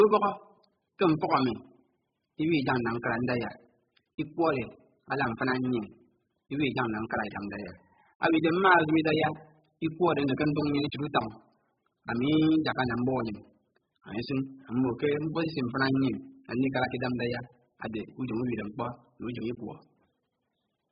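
Speech, with heavy coding damage running throughout. Nothing reaches above 5 kHz, so the sound is dull and muffled. Sustained sounds and sibilants warble and fizz. The cause is likely AAC compression, and the damage fits a very low bitrate, around 8 kbps.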